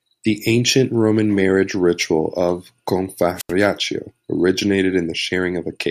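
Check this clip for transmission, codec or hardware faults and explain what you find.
One fault is present. From 3.35 to 3.53 s the speech gives way to a short burst of hiss, then about 83 ms of near silence before returning. This is a wireless microphone squelch dropout: the FM radio link weakened, so the receiver's squelch muted its output.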